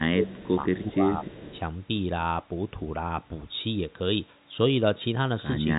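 Speech heard through a narrowband telephone channel, with nothing above about 3.8 kHz, consistent with G.711 A-law coding at 64 kbit/s and showing no more than faint coding damage. From 0.00 to 0.61 s and again from 0.77 to 1.58 s the voice dips by up to about 15 dB, for roughly half a second each time. This is speech suppressed in double talk, likely an echo canceller that could not tell the near talker from loudspeaker echo and attenuated both. Echo leak appears at 0.26 to 0.47 s, 0.76 to 0.91 s and 1.24 to 1.60 s as a faint copy of the voice trailing by 217 ms, around 25 dB below the speech in the first and third spans and near 35 dB below in the second, likely residual loudspeaker pickup that the far end's canceller passed back.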